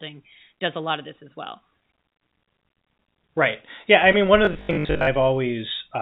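Short concealed packet loss hits this speech recording at 4.12 to 4.16 s. Some 20 ms of audio arrived too late, and the receiver patched about 15 ms of the gap by extending the preceding sound before blending back, which leaves a brief smear or wobble. Robotic sound from repeated short buffers follows from 4.45 to 5.09 s, a rigid metallic buzz at 50 Hz. That rate points to a 20 ms chunk being replayed over and over, with roughly half the span being repeats rather than fresh audio, likely because new audio arrived too seldom. Through all of this the call path cuts everything above 4 kHz, consistent with a narrowband telephone codec such as G.711.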